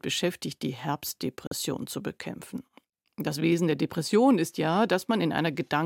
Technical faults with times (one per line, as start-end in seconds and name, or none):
1.47-1.53 corrupt frame muted